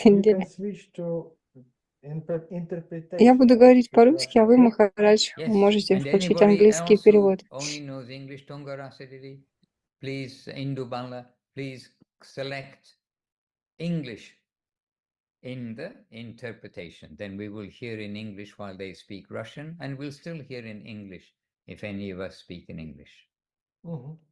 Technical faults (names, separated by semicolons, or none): none